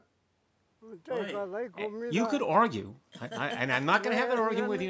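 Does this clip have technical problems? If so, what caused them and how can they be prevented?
Yes. A bit error spike appears twice, as a single sharp tick at 1.17 s and again at 3.83 s. Each is a flipped bit that throws a sample or two or three in a row by a power of two before the value snaps back. That makes a full-band click with no relation to the speech around it. Unlike a buffer dropout, nothing goes silent and no audio is lost. Unlike a mouth click, it has no acoustic body. Error-checked memory and links, or checksummed transport, would prevent it.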